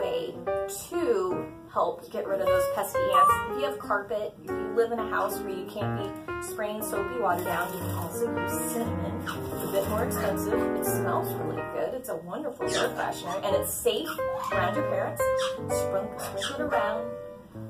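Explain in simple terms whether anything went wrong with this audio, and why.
No faults can be heard.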